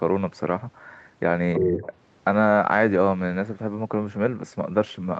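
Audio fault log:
1.54–1.88 s, other side's voice leaking through: a second, fainter voice sits under the main talker for about a third of a second, only a few dB below it. The likely cause is the far end playing from the talker's loudspeaker and being picked up again by the microphone, with the echo canceller failing to subtract all of it, so scraps of that returned signal pass into the call alongside the near voice.
1.58–1.87 s, speech suppressed in double talk: across almost the same span the main talker's level sags, by roughly 10 dB at its deepest, for around 300 ms before recovering. With both sides sounding at once, the canceller likely could not tell the near talker from the loudspeaker echo, and in clamping down on the echo it pulled the wanted speech down as well. That leaves the dip overlapping the leaked voice, with the whole band topping out near 8 kHz.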